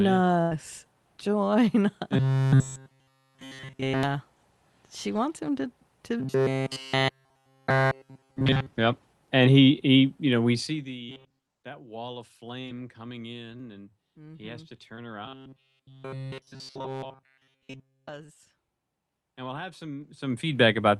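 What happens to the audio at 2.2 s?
From 2.17 s to 4.03 s the speech takes on robotic sound from repeated short buffers. It becomes a rigid, metallic buzz fixed at 133 Hz that only loosely tracks the speech. The likely cause is audio arriving too seldom, so a fragment of about 7.5 ms is looped while the real signal is skipped, and essentially all of this stretch is repeats. A spectrogram shows flat horizontal harmonics spaced 133 Hz apart, and the waveform shows identical cycles recurring every 7.5 ms.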